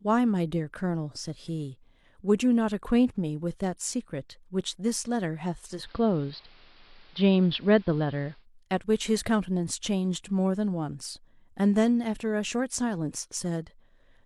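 At 5.73 s, digital radio blends to analogue AM until 8.46 s. Treble dulls. Faint hiss appears. Level shifts about 3 dB.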